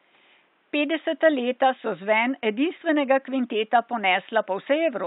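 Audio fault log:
No faults heard anywhere in the speech recording.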